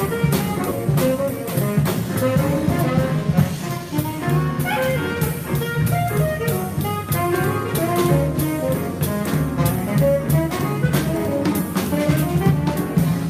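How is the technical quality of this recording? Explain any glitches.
The recording has two timing glitches near the start. Both come from how the audio was delivered and buffered, not from the sound itself.

At about 0.71 s there is a skip ahead. Roughly 0.7 s of audio was dropped while later audio was already queued, and the two sides are butted together with no filler. The result is an abrupt jump forward rather than a gap or a stutter. A dropout would leave silence or concealment noise, and a repeat would go back in time.

From 0.85 to 4.04 s a jitter buffer speed-up follows. The buffer was holding more delay than it wanted, so it trimmed short pitch-period pieces again and again, removing roughly 150 ms in total. The sound runs at 105% speed with unchanged pitch. That distinguishes it from resampling or clock drift, which would also raise the pitch.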